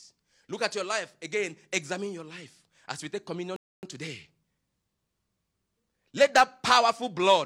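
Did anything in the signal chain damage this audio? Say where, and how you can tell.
Yes: a rebuffering stall at 3.56 to 3.83 s, after "life as we take". Playback starved and fell silent, then resumed seamlessly, adding 267 ms without losing speech.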